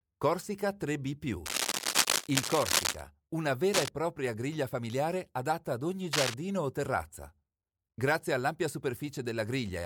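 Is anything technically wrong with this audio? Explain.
Yes. Cable scratch noise breaks in three times: from 1.45 to 3.01 s, from 3.73 to 3.89 s just before "propria griglia familiare adatta", and from 6.13 to 6.34 s between "familiare adatta ad ogni" and "o terrazza". Each is a dense, uneven scratching about as loud as the speech. This is likely a worn cable or connector being moved, its contact resistance jumping rapidly. A waveform shows ragged spiky clusters, and a spectrogram shows broadband vertical smears.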